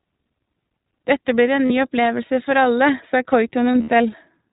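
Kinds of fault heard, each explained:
iLBC codec: The speech has a rough, slightly synthetic edge throughout and no content above 4 kHz, because each 20 ms frame is coded on its own in narrowband at a rate that fits 15.2 kbps, so codec damage is plainly audible.
Lost iLBC frames: At 1.66 s the sound briefly turns into a held, buzzy vowel for about 40 ms, and near 3.72 to 3.90 s brief patches recur, the longest about 70 ms. The decoder repeated the last pitch cycle with noise, then recovered almost immediately.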